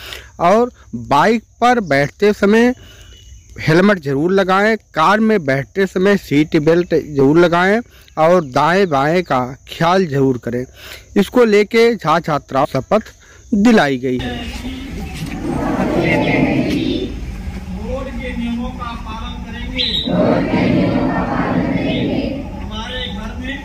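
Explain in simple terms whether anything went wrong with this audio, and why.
Damaged data in a compressed stream causes brief glitches at 7.2, 12.63–12.65, 20.06 and 23.48–23.5 seconds. The player misreads corrupted chunks.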